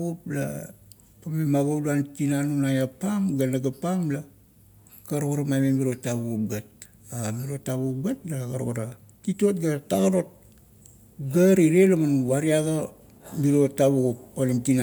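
Nothing in this recording trips any of the usual alarms, so there's no technical fault to point out anywhere along it.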